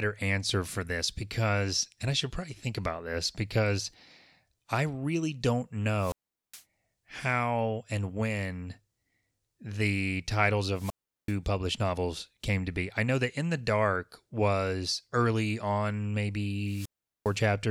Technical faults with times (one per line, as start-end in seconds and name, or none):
5.97-6.63 wireless microphone squelch dropout
10.74-11.36 wireless microphone squelch dropout
16.61-17.43 wireless microphone squelch dropout